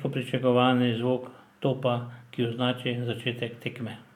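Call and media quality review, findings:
No findings in this call and media quality review.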